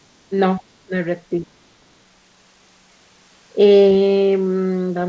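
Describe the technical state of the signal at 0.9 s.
Speech dips sharply, by roughly 25 dB, from 0.84 to 0.92 s, likely speech suppressed in double talk as the echo canceller ducks the overlapping talker.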